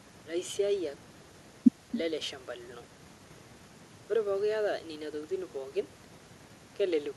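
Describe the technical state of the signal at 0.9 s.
At 0.9 s, echo with no canceller runs through the whole clip: the speech returns about 21 dB quieter roughly a third of a second later, as a faint, offset copy of each burst in the spectrogram.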